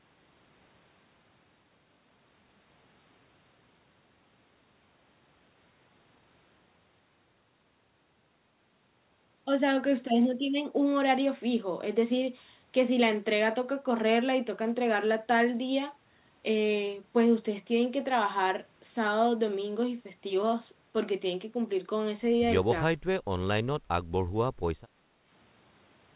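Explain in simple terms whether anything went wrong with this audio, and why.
Near the end, from 24.87 to 25.25 seconds, the room sound briefly dips for under half a second, then comes back. That is background gated by the echo canceller: while the loudspeaker was playing, the canceller turned the microphone down.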